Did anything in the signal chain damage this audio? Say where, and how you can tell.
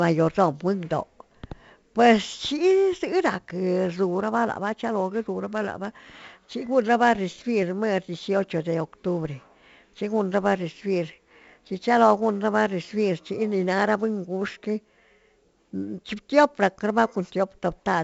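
Yes, at the codec stage: 4-bit ADPCM compression runs through the whole speech clip, which fits a 64 kbps stream. Each sample's coarse quantised step leaves gritty hiss riding every loud syllable and smeared attacks, while nothing survives above 7.7 kHz, dulling the top end.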